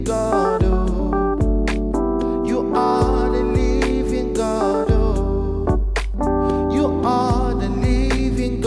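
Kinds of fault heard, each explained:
Nothing stood out on listening; no fault could be heard anywhere in the clip.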